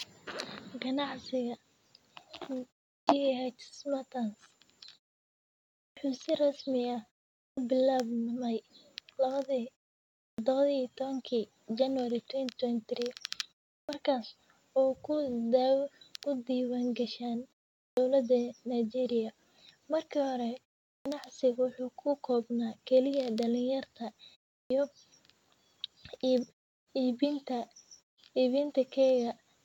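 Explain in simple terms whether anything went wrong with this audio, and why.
Clipped start after a pause at 2.96, 5.85, 7.46, 10.27, 13.76, 17.85, 20.93 and 24.58 s. The playback device dozes during each short silence, so the first 0.11 to 0.13 s of speech is lost while it wakes.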